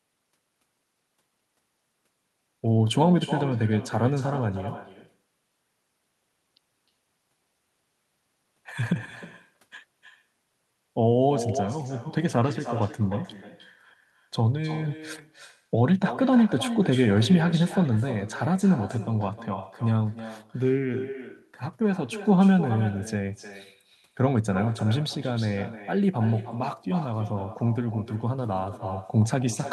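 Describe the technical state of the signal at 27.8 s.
At 27.8 s, as throughout the clip, there is echo with no canceller: the far end's loudspeaker feeds its microphone unchecked, so speech returns roughly 300 ms later as a thinner copy about 13 dB down.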